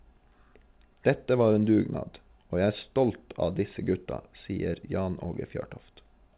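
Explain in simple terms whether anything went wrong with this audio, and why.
Nothing went wrong with this speech: it passed through an ordinary call connection whose sound stops at about 4 kHz, which points to a standard telephone codec such as G.711 mu-law, so the missing top end is how phone-call audio normally sounds and not a fault.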